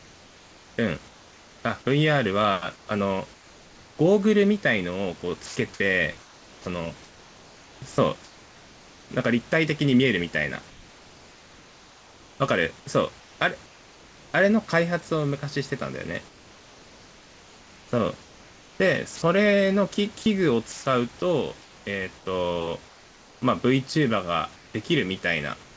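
Comfort noise in place of the background, from 0.0 to 3.98 s, 5.46 to 9.10 s and 10.70 to 14.34 s: in each pause the real room noise, sitting about 27 dB below the speech, turns into a steady, featureless hiss. This is likely the sender's voice detector stopping transmission and the receiver synthesising roughly matched noise until speech resumes.

Sound dropped by the voice detector, at 5.46 to 5.56 s: about 60 ms of sound vanishes into that same flat noise over a 100 ms stretch. The detector likely classed the quiet sound as background and withheld it.

Sound chopped by the voice detector, from 16.28 to 25.76 s: transmission likely toggles repeatedly, so roughly 3.6 s in total of sound is swapped for comfort noise. The speech sounds choppy. Throughout, the band stops at 8 kHz, consistent with G.722 at 64 kbps.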